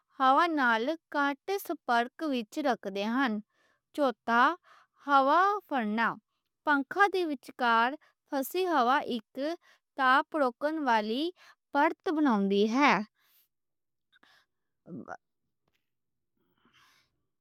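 No technical faults can be heard anywhere in this speech recording. Nothing in it calls for a timestamp or a note about what went wrong.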